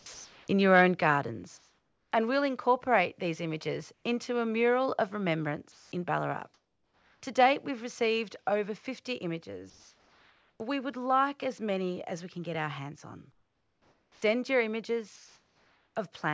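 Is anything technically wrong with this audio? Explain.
Yes, several faults typical of a call with voice-activity detection are audible in this speech.

From 0.00 to 0.48 s the speech is chopped by the voice detector. For about 0.4 s of that stretch, quiet parts of the sound are replaced by a brief fill of comfort noise, likely because the sender's detector flipped between sending and muting more than once. The result is choppy. On a spectrogram, short blocks of smooth, uniform noise interrupt the speech energy. The waveform shows the envelope dropping to a steady low band between fragments.

Between 0.73 and 0.82 s there is microphone overload. The loudest syllables exceed the converter's ceiling by about 3 dB, likely from input gain set too high. A small share of samples is flattened, adding a harsh, crackly edge to those peaks. In the waveform the tops and bottoms are sliced flat at the converter's limit. 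A spectrogram shows faint broadband smearing above the harmonics at those instants.

At 1.02 s the microphone volume steps down by about 4 dB, shortly after that distorted peak. The likely cause is the call software's automatic gain control cutting the input in a single move. Voice and background both become abruptly quieter. The waveform envelope shows a clean step down at that point. On a spectrogram, every band dims at once, with no change in spectral shape.

Comfort noise replaces the background at 1.58–2.12 s, 3.94–4.04 s, 5.72–7.22 s, 9.70–10.60 s, 13.32–14.22 s and 15.16–15.96 s. During pauses the sender likely stopped transmitting, and the receiver filled the gap with synthetic noise roughly matching the background's spectrum. The real ambience loses its detail and becomes a steady, featureless hiss. It is often quieter than the real background, by about 4 dB in the first gap, about 2 dB in the second and about 9 dB in the 13.32 s gap. 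A spectrogram shows those stretches as smooth, texture-free bands. The waveform shows a flat, constant noise floor instead of the fluctuating original.

From 14.10 to 14.22 s the onset is clipped by the voice detector. The first 120 ms of the returning speech is missing, with comfort noise played in its place, likely because the detector was slow to notice the sound resuming. The speech therefore starts abruptly, without its soft attack. In the waveform the envelope jumps from the flat noise floor straight to full level. The spectrogram shows harmonics appearing at once, with no gradual build-up.

The call path itself, a G.722 link at 64 kbps, works normally, and on a spectrogram its cut-off leaves no energy above 8 kHz.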